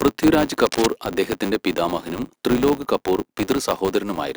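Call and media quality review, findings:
Filter restarted on every block: processing filter loses state at each block boundary, restarts from zero. Each block opens with a small transient, giving a steady 100 Hz buzz through the whole speech clip, which fits blocks of about 10 ms. Buzz tracks speech level, louder on stronger passages, receding in quieter ones. Component: per-block filter stage, state not carried between calls.

Cable scratch noise, 0.66–0.89 s: likely a worn cable, connector or control being moved, contact resistance fluctuating fast. Result is dense, irregular noise bursts laid over the speech for about a quarter second, sitting roughly 10 dB below the signal. Heard as brief scratching/rustling, then gone. Component: physical signal path upstream of capture.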